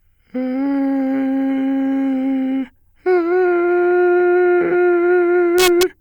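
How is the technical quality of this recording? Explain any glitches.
The music breaks into harsh, violent cracks near the very end, from 5.59 s to 5.83 s. That burst is integer overflow. The signal there was pushed about 1 dB past the largest value the integer format can hold, and instead of being limited at the ceiling, each peak wrapped around to the opposite extreme of the range. Every over-limit sample jumps full-scale across zero, which sounds far sharper and more brutal than ordinary clipping.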